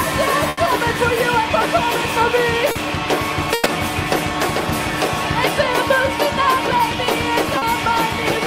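At 0.49 s there's a burst of packet loss: the receiver papers over an 80 ms hole by stretching the last sound and fading it, then jumps ahead, so 60 ms of audio are gone. A short concealed packet loss at 2.71 s smears about 40 ms, where the decoder filled in for audio that never arrived. Another burst at 3.54 s fills 120 ms and skips 120 ms of real audio. A second short concealed loss at 7.58 s covers another 40 ms with a brief blended wobble.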